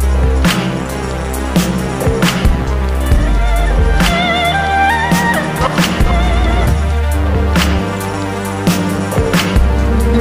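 Nothing goes wrong anywhere along the way here, so there's no technical fault to point to at any moment.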